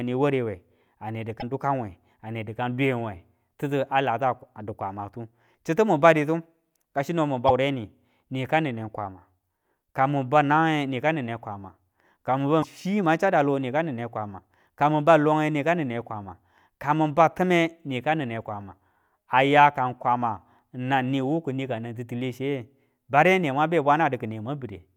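Damaged data in a compressed stream appears at 1.38–1.43 s, 7.45–7.51 s and 12.59–12.64 s. Each time, corrupted bytes make the decoder lose frame sync and hunt for the next valid header, so the speech breaks into a brief chirp, squawk, click or short hole about 50 ms long.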